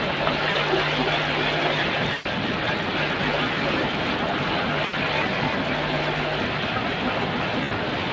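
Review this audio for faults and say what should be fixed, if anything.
Speex codec damage runs through the whole recording and is plainly audible: the speech has the noisy, hoarse grain of a CELP coder with too few bits for its excitation signal. The coarseness fits a wideband mode at about 20 kbps, with content reaching up to 8 kHz, which is the normal limit of the call's microphone chain. Fix: send at a higher Speex quality setting, or move the link to a modern codec such as Opus.

An echo leak is also present from start to finish. A delayed copy of the speech trails the direct sound by about 312 ms. It sits only a few dB below the talker. The likely cause is a far end on loudspeaker whose acoustic echo canceller did not fully remove its own playback before sending it back. Fix: repair or retune the far end's echo cancellation, or have that participant use a headset.

VoIP packet loss concealed by the speech codec occurs four times: at 0.51 to 0.57 s (40 ms), 2.13 to 2.27 s (120 ms), 4.85 to 4.95 s (80 ms) and 7.63 to 7.72 s (80 ms). 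At each gap the decoder stretches its last pitch and spectral envelope into a fading buzzy tone or coloured noise, and the speech stays weak or distorted for a short time after real packets resume. Fix: improve network reliability and add jitter buffering or forward error correction.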